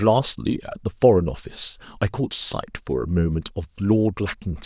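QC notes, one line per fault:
No technical faults turn up anywhere in the signal.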